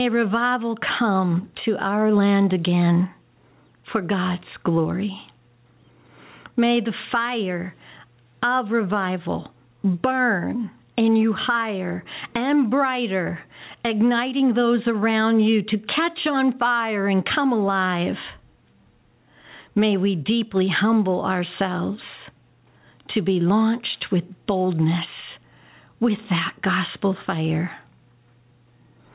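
A speech recording with gain pumping throughout. The gain swings by roughly 15 dB. This is likely a fast limiter or compressor fighting a microphone gain set far too high. On a waveform the peaks look flattened to a near-constant ceiling while the gaps rise. A spectrogram shows the noise floor brightening between phrases and darkening under speech. The spectrogram also shows nothing above 4 kHz, consistent with a narrowband call path such as G.711 A-law.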